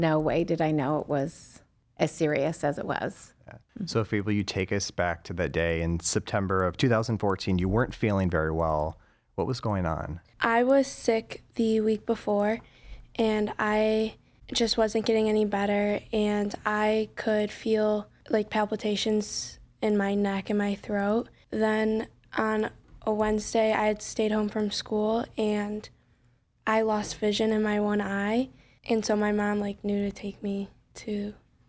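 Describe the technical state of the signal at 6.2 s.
At 6.2 s the speech carries a resampler restarted on every block, a fault running through the whole clip. Each 100 ms block is converted alone, likely from 24 kHz to 16 kHz, leaving small edge errors. They sound as steady ticks at 10 Hz under the speech.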